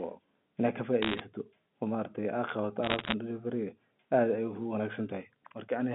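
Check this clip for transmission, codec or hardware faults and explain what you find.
The clip has bit errors on a digital phone line in two bursts, from 1.02 to 1.20 s and from 2.83 to 3.14 s. Individual bits in the G.711 mu-law stream were flipped, roughly 0.7 percent of bits. Each flip corrupts a single sample, and hits on high-order bits or on the sign of loud samples produce sharp ticks. These ticks cluster into crackle over the speech, which itself stays band-limited to the usual telephone range below about 3.5 kHz.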